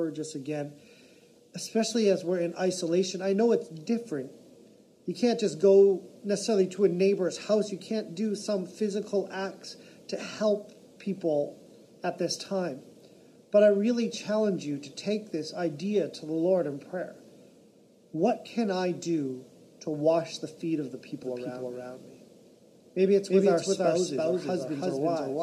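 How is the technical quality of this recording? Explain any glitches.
The recording has one clear glitch, a doubled audio track, near the end. From 21.2 s to the end, a second copy of the sound enters abruptly and runs about 300 ms behind the original at roughly the same loudness. It is a dry, full-band repeat with no decay or room colour, so everything sounds stuttered and echoed. The likely cause is the same signal being captured twice, once through a slower path, or two out-of-step copies left overlapping in an edit.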